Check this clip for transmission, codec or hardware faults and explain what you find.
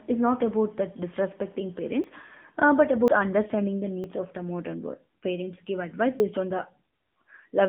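Two faults are present: mobile-codec coding throughout and four brief skips.

Throughout, the AMR narrowband mobile codec limits the speech to about 200 Hz–3.5 kHz, buzzy and synthetic, as expected near 8 kbps. A spectrogram shows a flat ceiling near 3.5 kHz.

At 2.04, 3.08, 4.04 and 6.2 s, the sound jumps ahead by a few tens of milliseconds, likely a dropped buffer (overrun). The waveform shows an abrupt step with no gap.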